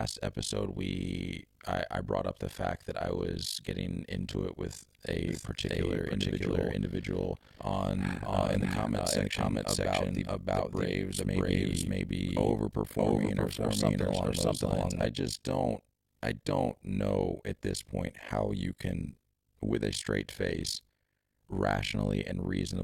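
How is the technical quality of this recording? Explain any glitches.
The technical quality is poor. The speech carries a constant mechanical flutter, and for about ten seconds in the middle it is doubled by a delayed copy of itself.

Overlap-add ripple runs throughout the clip. The audio appears to have been split into windowed frames and rejoined with overlaps whose gains don't add up to a steady level. The loudness therefore pumps once per frame, at around 50 Hz, with swings of about 60 dB. That depth is extreme, so the speech sounds chopped into a harsh, buzzy, robotic tremolo rather than a gentle flutter.

A doubled audio track appears from 5.28 s to 15.06 s. A second, full-band copy of the speech trails the original by roughly 0.7 s at about the same loudness. It has no decay or room colouring, so it doesn't sound like a natural echo. It switches on and off abruptly at those two points. 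The likely cause is a second capture of the same signal arriving through a slower path, or an edit that left two unaligned copies in the mix.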